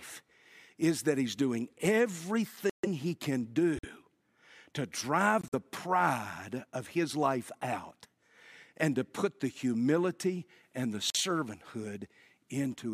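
At 2.70 s the speech drops into abrupt silence for about 0.18 s, then again at 3.77 s (0.08 s), 5.41 s (0.13 s) and 11.10 s (0.06 s). These are corrupt frames muted: damaged compressed frames were rejected by the decoder and replaced with silence, so each gap spans whole frames, consistent with frames of roughly 25 ms. Timing is preserved. The waveform shows flat, hard-edged holes, and the spectrogram shows clean vertical blank bands.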